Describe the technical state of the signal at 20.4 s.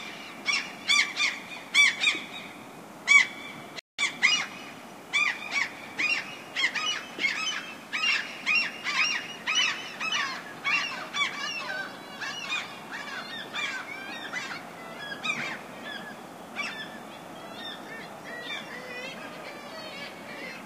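At 20.4 s the signal is intact, with no audible technical fault at that moment.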